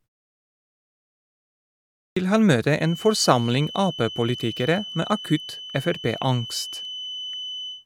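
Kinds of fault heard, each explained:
Clipped start after a pause: after about 1.76 s of silence at the top, the output device seems to have dozed off and needs time to wake up again, so the first 0.40 s or so of sound never makes it out. The speech comes in abruptly around 2.16 s at "vil han møte", with its opening sounds missing and no natural onset.
Feedback whistle: from about 2.74 s, right after "vil han møte", a thin, steady tone at 3 kHz sits behind the speech through to the end, swelling and fading slowly in level and staying roughly 15 dB under it. That's most likely a loudspeaker-to-microphone loop parked right at the edge of feedback, ringing on one frequency without ever running away into a howl.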